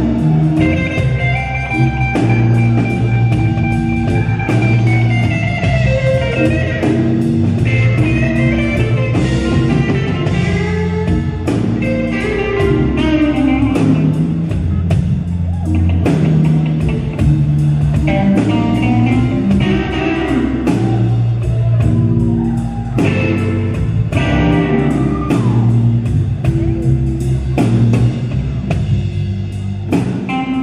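From 16.97 to 19.86 s there's GSM phone buzz: a 2G handset on a call nearby is bursting at 217 Hz, and the audio circuitry is rectifying those radio pulses. You get a steady, raspy, harmonic-rich buzz sitting about 32 dB under the sound.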